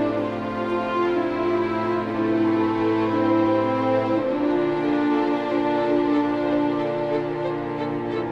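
No dropout, distortion, glitch or other technical fault is audible anywhere in the recording.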